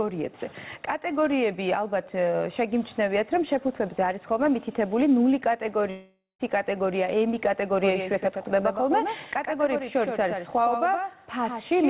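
At 5.9 s a long network dropout starts, likely caused by packets that never arrived. Half a second of audio is lost. The last sound stretches into a fading buzz, then about 130 ms of silence runs until 6.41 s. A spectrogram shows smeared, decaying bands followed by a blank gap.

From 7.80 s to the end, a doubled audio track appears. A second copy, about 5 dB quieter, trails the original by about 100 ms, likely because it was captured again through a slower path. It starts abruptly, and the waveform shows every onset repeated at that fixed spacing.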